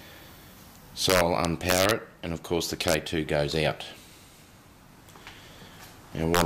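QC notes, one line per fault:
1.10–1.91 s, 2.88–2.94 s, 6.35–6.41 s: integer overflow. Peaks pushed about 3 dB past full scale wrap to the opposite sign instead of limiting, causing harsh cracks. The waveform shows full-range vertical jumps, and the spectrogram shows broadband vertical streaks at each wrap.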